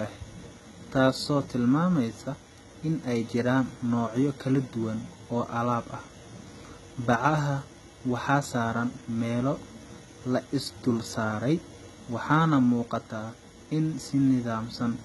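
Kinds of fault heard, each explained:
HE-AAC compression: The treble above the lower band sounds synthetic, with s sounds turned gritty and lispy, and nothing at all above 11.8 kHz. This likely comes from spectral band replication copying lower bands upward. The heavy damage fits a bitrate around 16 kbps.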